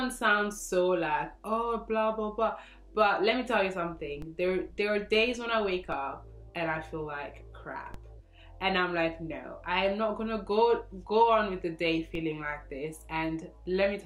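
The zero line of the waveform jumps in a DC step at 4.22, 5.92, 7.94 and 12.15 s, each offset about −30 to −28 dBFS and decaying through a 20 Hz high-pass. Each jump sounds as a low thump or click while the sound continues unchanged.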